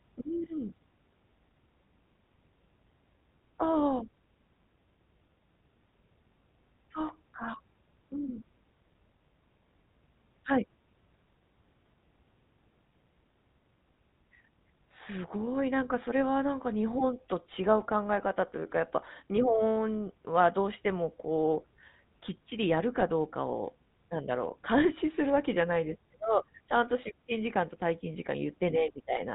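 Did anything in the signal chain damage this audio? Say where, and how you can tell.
Yes, at the codec stage: the speech carries GSM full-rate coding throughout, plainly audible as a buzzy, gravelly roughness and nothing above 4 kHz, which fits a 13 kbps stream. The codec models the vocal tract and excites it with sparse, regularly spaced pulses.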